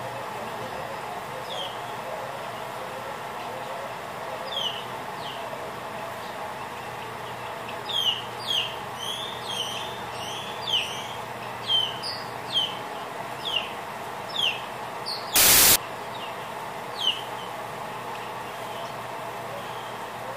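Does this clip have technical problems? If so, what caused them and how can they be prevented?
Yes. From 15.36 to 15.76 s the audio turns into loud, harsh noise with the original faintly buried inside, running at three quarters speed and lower in pitch. This is a wrong sample width fault. Data written as 32-bit integers were read as packed 24-bit samples, so most values combine mismatched bytes and only some keep the true top bits. A byte-order swap also gives loud noise, but it leaves the speed unchanged; here the slowdown points to a width mismatch. Declaring and checking the sample format at every write and read prevents it.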